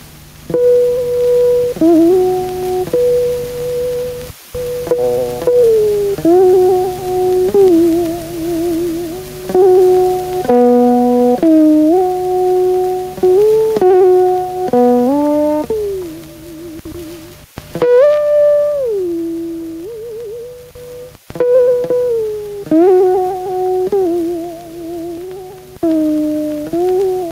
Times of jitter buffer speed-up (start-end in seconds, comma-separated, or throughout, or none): none